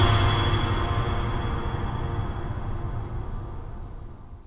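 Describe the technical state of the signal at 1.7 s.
At 1.7 s the music signal is intact, with no technical fault present at that moment.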